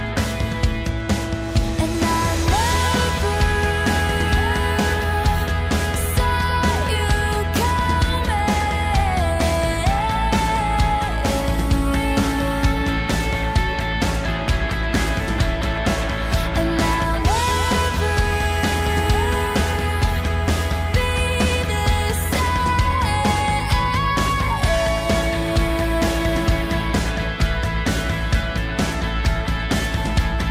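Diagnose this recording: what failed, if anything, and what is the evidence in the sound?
Nothing failed; no stage in the chain shows trouble.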